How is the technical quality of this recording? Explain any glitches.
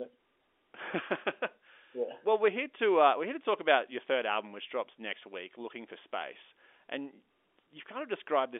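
No glitches can be heard anywhere in the recording. The speech carries the narrow, boxy character of G.711 telephone coding, with the sound confined to roughly the 300 Hz to 3.5 kHz line band, which points to an ordinary 64 kbps A-law phone path working as expected.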